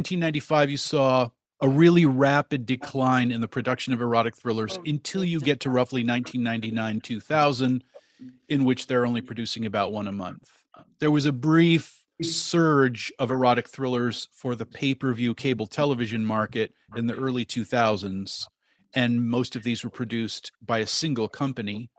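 From 0.84 s to the end of the clip there is an echo leak: a delayed copy of the speech trails the original by 455 ms, sitting well below it, around 20 dB down. The likely cause is a far end playing the call over a loudspeaker, with its echo canceller failing to remove everything the microphone picked up, so the residue was sent back. The repeat comes through the same 8 kHz-limited Opus path as the direct speech.

Between 4.33 s and 8.1 s, speech is suppressed in double talk. The talker's level drops out in pieces, about three seconds in total, with the deepest dips around 40 dB. This is likely the echo canceller's suppressor reacting to both sides talking at once: unable to separate the near talker from loudspeaker echo, it attenuated everything and took the wanted speech down with the echo.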